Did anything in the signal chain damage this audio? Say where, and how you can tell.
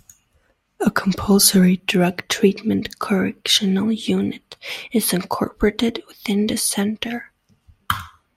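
No, nothing in the signal chain stood out as damaging this speech on listening.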